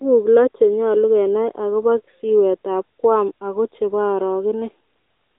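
Speech heard through the AMR narrowband mobile codec for its whole length: the band stops near 300 Hz and 3.7 kHz, and a buzzy, synthetic edge from the pulse-driven vocal-tract model, pointing to a mid mode around 10 kbps, sets it apart from a simple telephone-band filter.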